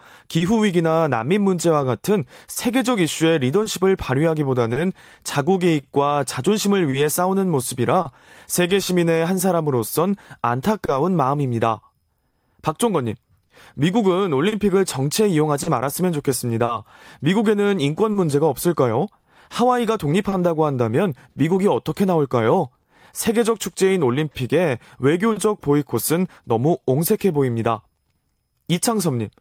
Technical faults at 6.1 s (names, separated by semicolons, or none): clock drift between sender and receiver; repeated timing corrections; scattered short gaps